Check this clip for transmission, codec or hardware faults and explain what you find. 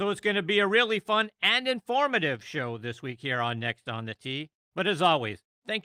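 No transmission, codec or hardware faults can be heard anywhere in the recording, and the signal holds steady without any disturbance.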